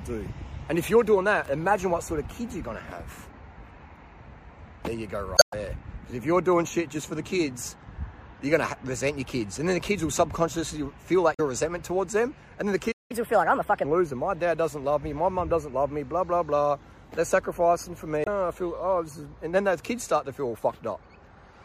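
Short glitches break the sound at 5.35 to 5.54 s, 11.35 to 11.40 s and 18.23 to 18.28 s. This is damaged data in a compressed stream: corrupt frames make the decoder misread or drop them and resynchronise at the next frame header.

At 12.91 s the sound cuts out for about 180 ms and resumes at 13.12 s. This playback stall likely comes from the player running out of buffered data or having its thread blocked.

From 13.12 to 13.85 s the sound plays noticeably fast and high, at 1.25 times speed and roughly four semitones up, then settles back. This catch-up at higher speed resamples the backlog to recover the time lost in the stall.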